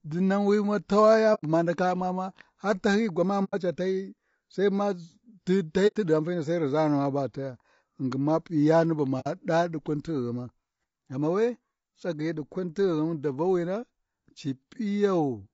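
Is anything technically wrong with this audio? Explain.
Yes. Throughout the speech the sound is rough and grainy, with noise filling the gaps between harmonics and a thin, synthetic-sounding top band. This is plainly audible damage that is likely from low-delay AAC compression (AAC-ELD) at around 32 kbps. The codec works in short frames of roughly 30 ms, too short to separate closely spaced pitch harmonics cleanly, and at this bitrate it runs short of bits. On a spectrogram the harmonic stripes look smeared, with haze between them and a patchy, blocky upper band.

There are also four dropouts from AAC frame loss with muting. They occur at 1.34–1.44 s, just before "buma ndaka", at 3.44–3.55 s, between "tahyiyi gwamani" and "ca tahyiyi", at 5.87–5.97 s, and at 9.20–9.27 s. The first three are about 90 ms long, which fits three lost frames, and the last is about 60 ms, which fits two. The decoder zeroed the missing frames, and its overlapping windows fade the sound out and back in, so each gap is a soft-edged hole. 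On a waveform each shows as a tapered flat stretch, and on a spectrogram as a clean vertical blank band.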